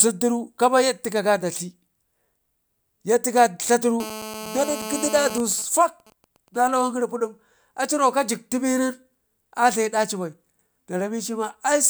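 GSM phone buzz runs from 4.0 to 5.38 s: a nearby 2G phone in a call transmits bursts about 217 times a second, and the audio circuitry rectifies them into a hard, raspy 217 Hz buzz rich in harmonics, steady and unrelated to the speech, about 11 dB below it.

GSM signalling bursts follow from 5.40 to 6.58 s, when the same phone's user falls silent and it transmits only short groups of bursts. These rectify into even ticks with a longer 217 Hz buzz twice a second, far quieter, roughly 25 dB below the speech.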